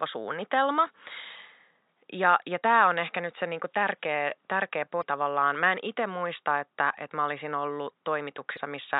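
Just after "se niinku tärkeä tärkeä", from 5.00 to 5.03 s, and again from 8.56 to 8.59 s, the speech skips forward with a brief glitch, which fits one 24 ms MP3 frame. The likely cause is a broken MP3 bit reservoir: after frames were lost, the following frame reached back for borrowed bits and decoded another frame's bytes. Room noise sits about 52 dB below the speech.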